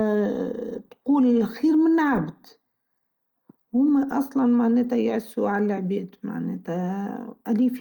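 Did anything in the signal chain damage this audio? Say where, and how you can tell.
No, nothing along the way seems to have touched this speech recording, and there's no stage of the chain I'd point a finger at.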